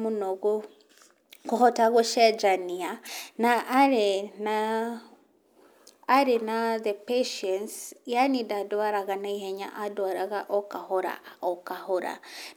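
At 3.05 s the speech breaks into a short glitch lasting about 40 ms, ending by 3.09 s. This is damaged data in a compressed stream: a stretch of the encoded bytes was corrupted, so the decoder misread those frames and had to resynchronise on the next valid frame header.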